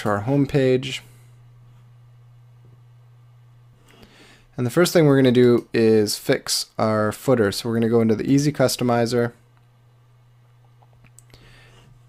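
No faults found in this audio; nothing to flag and no cause to trace.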